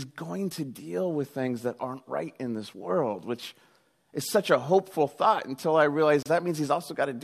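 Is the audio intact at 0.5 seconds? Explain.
Yes, at 0.5 seconds the speech runs intact, with no dropout, click, distortion or other fault audible at that moment.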